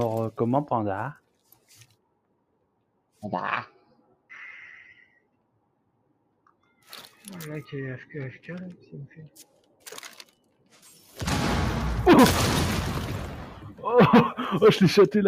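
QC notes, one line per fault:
Throughout: noise suppressor applied to music or sounds. A speech-tuned suppressor is treating held and ambient content as noise, so gain rides up and down by roughly 10 dB; onsets pass while sustains and tails are pulled back, giving a pumping, thinned texture.
1.14–3.23 s, 3.69–4.29 s, 4.99–6.91 s, 8.75–9.87 s, 10.17–11.18 s, 13.51–13.83 s: sound cut by the noise suppressor. In each span the suppressor classes the sustained material as noise and ducks it, by about 18, 17, 18, 16, 17 and 11 dB at the deepest, so decays sink early while transients stay mostly intact.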